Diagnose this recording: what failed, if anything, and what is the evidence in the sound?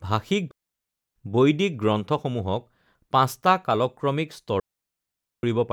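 The digital wireless link between the microphone transmitter and its receiver failed twice, a digital wireless dropout each time. When too much of the radio data was lost, the receiver muted its output behind a very short fade instead of passing on corrupted audio. The speech gives way to clean, near-silent holes from 0.51 to 1.16 s, about 0.65 s long, and from 4.60 to 5.43 s, about 0.84 s, with no burst of noise before or after either one.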